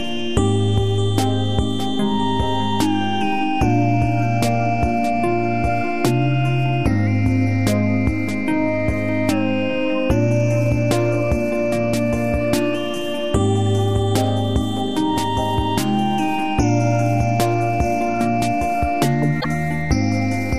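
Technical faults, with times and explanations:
19.40–19.48 s, repeated frames: a 78.4 ms block plays twice, which fits a few compressed frames sent again. It sounds like a brief stutter and lengthens the audio by 78.4 ms.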